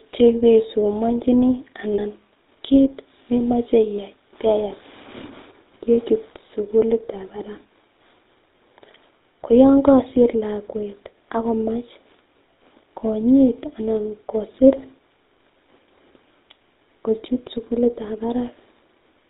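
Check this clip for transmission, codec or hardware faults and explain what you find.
Two faults are present: coding damage from the GSM full-rate codec across the whole speech clip, and two short bursts of lost GSM frames.

Throughout, the GSM full-rate codec is plainly audible. The coder rebuilds speech from a vocal-tract filter fed with a sparse, regularly spaced pulse excitation, which fits the 13 kbps full-rate scheme. That coarse excitation gives the speech a buzzy, gravelly edge. On a spectrogram, energy stops sharply at 4 kHz, and the harmonics below look smeared and grainy rather than clean.

At 1.94 to 2.00 s and again at 3.96 to 3.99 s there are lost GSM frames. The decoder fills each gap by repeating the last good frame's settings. The first gap lasts 40 ms, which fits two 20 ms frames, and the second lasts 20 ms. Each one sounds like a brief, rough metallic ring held over the speech. 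In the waveform, the stretch looks repetitive. On a spectrogram, it shows flat, frozen bands in place of the normal moving formants.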